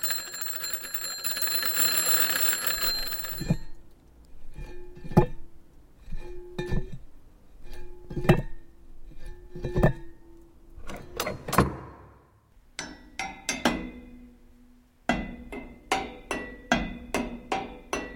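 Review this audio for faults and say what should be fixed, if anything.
No faults turned up in this audio, so nothing needs to be fixed.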